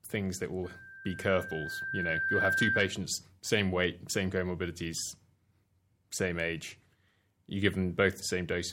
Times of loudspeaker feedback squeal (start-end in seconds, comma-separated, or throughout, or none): 0.64-2.99